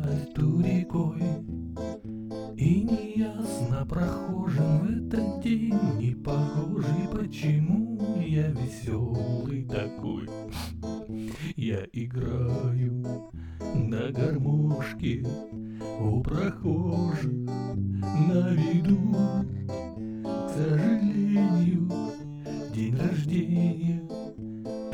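Channel delay (doubling) runs throughout. One channel arrives 40 ms late, and once both are summed to mono, every sound gets a same-level doubled slap.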